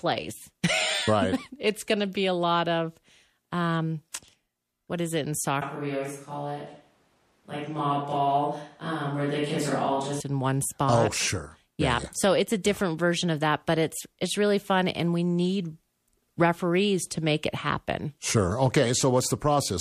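Pre-echo at 4.13 s, just after "a lot of um". A sharp attack landed late in a transform block, and the codec spread its quantisation noise across the whole window, including the quiet moment before the onset. The result is a brief hiss about 17 ms ahead of the attack, roughly 13 dB above the surrounding floor, with the attack itself sounding smeared. The spread fits a block of around 36 ms, with no switch to shorter blocks for the transient.

Switch to a distant microphone from 5.62 s to 10.20 s, starting right after "what is it in" and returning before "in one oh spot". The speech abruptly becomes roomy and hollow, with thinner low end and a drop of around 5 dB in level, while room noise sits roughly 40 dB below the speech and becomes more audible. The likely cause is that the close microphone's signal dropped out and a more remote pickup carried the recording. The return is equally sudden.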